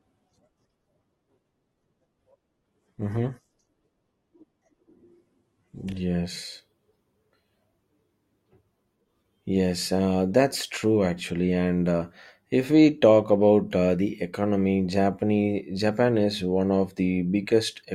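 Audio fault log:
0.0–6.0 s, adaptive stream starting at a low bitrate: the opening six seconds of speech are dull, with nothing above 12.2 kHz and heavier codec artefacts. This fits a player that opened on a low-bitrate rendition, around Opus 12 kbit/s, so playback could begin quickly. Once it had measured the connection, it stepped up to a richer version, around Opus 64 kbit/s. At 6.0 s the sound brightens abruptly, with no gap in playback.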